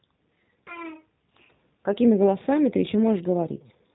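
A speech recording carrying G.729 codec damage for its whole length: energy stops near 3.8 kHz, and the voice sounds rough and slightly synthetic, as rebuilt from a vocal tract filter and sparse pulses. The plainly audible degradation fits 8 kbit/s G.729A coding.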